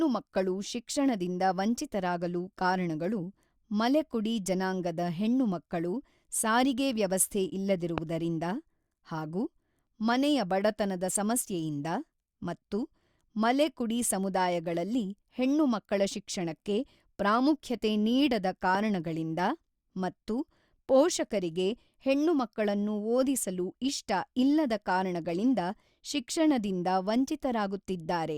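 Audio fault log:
7.98–8.00 s and 18.75–18.77 s, loud pop: a single sharp pop each time, about 15 dB above the speech, which carries on underneath. This is likely a sudden voltage pulse, as from a plug, a switch or static, added to the signal and shaped into a brief click-thump.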